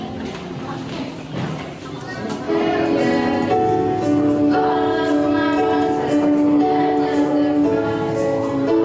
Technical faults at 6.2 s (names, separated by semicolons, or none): gain pumping